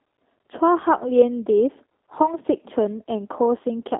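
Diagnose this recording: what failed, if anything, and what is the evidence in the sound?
The fault sits in the codec stage: the speech has passed through G.729 (the G.729A variant) for the whole clip. The band is confined to roughly 300 Hz to 3.7 kHz, and the voice has a plainly audible rough, synthetic edge, which fits an 8 kbit/s coder that rebuilds speech from a vocal tract filter, a pitch predictor and a few pulses per frame rather than the actual waveform. A spectrogram would show an empty region above 3.7 kHz and smeared, grainy harmonics below it.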